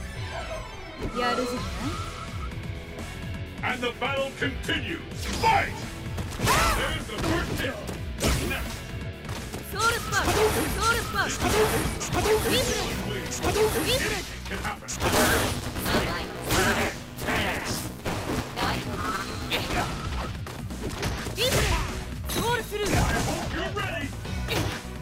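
From 14.98 to 19.75 s there is buffer tearing: writer and hardware reader slipped, so about two-fifths of each buffer repeats audio roughly ten milliseconds old. The result is a 188 Hz robotic rattle, fitting a 256-sample buffer. Unlike underruns, it leaves no gaps.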